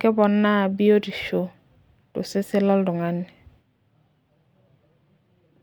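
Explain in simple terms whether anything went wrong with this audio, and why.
Nothing went wrong on the technical side: the speech recording comes through as a steady, unbroken signal with no audible faults at any point.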